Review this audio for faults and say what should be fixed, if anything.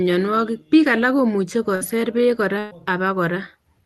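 Two bursts of packet loss occur, at 1.75–1.84 s and 2.59–2.74 s. The receiver stretches the last speech into a fading buzz or hiss for about 54 and 119 ms, then jumps ahead with about 60 and 120 ms missing. Unlike a plain dropout, the second never goes silent. Enabling Opus in-band FEC and a deeper jitter buffer would prevent it.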